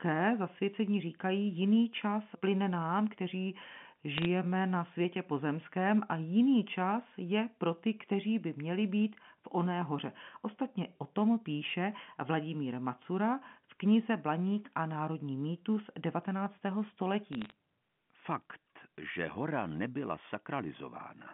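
Two short bursts of bit errors on a digital phone line turn up, at 4.18 to 4.26 s and 17.33 to 17.52 s. Flipped bits corrupt single samples, so you get sharp ticks and crackle over speech that otherwise carries the usual 3.4 kHz telephone band.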